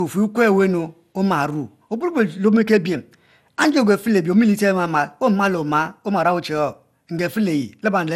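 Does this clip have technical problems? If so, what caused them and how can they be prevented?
Yes. Generation loss runs through the whole speech clip. It sounds swirly, smeared and hollow, and attacks blur. Nothing is present above 16.7 kHz. The likely cause is repeated MP2 encoding, about five times, at a rate that fits 96 kbit/s. Each pass adds fresh quantisation noise. Keep a lossless master and encode to a lossy format only once.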